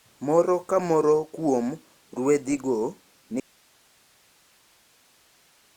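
A speech recording in which, at 3.4 s, the speech cuts out abruptly and never returns: from there to the end only a thin bed of hiss remains, sitting around 35 dB below the level of the speech before it. The change is sudden, not a fade or a natural pause. This is an audio dropout to a faint residue, most likely the source feed failing while the recording path downstream stayed live and kept passing its own noise.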